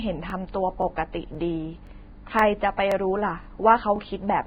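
Throughout, the speech bears heavy damage that is likely from low-bitrate Vorbis compression: nothing remains above 4.9 kHz and coarsely quantised treble turns into grainy hiss. From 0.30 s, overlapping chunks make each roughly half-second block begin before the previous one ends, so about 23 ms replays as a stutter at 0.30, 0.82, 1.35, 1.87 and 2.39 s. At 2.77 s, pre-echo spreads the codec's block noise about 19 ms ahead of an attack, leaving a brief hiss and a smeared onset. The overlapping-chunk stutters continue at 2.92, 3.44 and 3.96 s.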